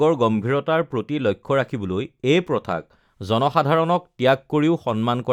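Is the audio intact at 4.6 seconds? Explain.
Yes, the audio is intact at 4.6 seconds, with no fault at that moment.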